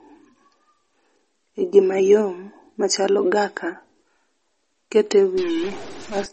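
From the start to the end of the speech, the sound carries plainly audible damage that points to MP3 compression, with a bandwidth and swirl that fit a low bitrate around 32 kbps. Nothing is present above 8.4 kHz, so s sounds lose their top and turn dull, while weak spectral detail flickers in and out between frames, giving a watery, chirpy texture. Unlike a plain low-pass filter, the damage shifts constantly with the signal rather than simply muffling it.

From 5.38 to 6.26 s a distortion appears, and the gaps between sounds fill with a hiss-like noise instead of staying quiet. This points to a stuck bit, likely one data line held at a fixed value so that about half the samples are thrown off by that bit's weight. Clipping would only flatten the peaks, but here the quiet stretches are corrupted as well, because the error follows the sign and size of the small values.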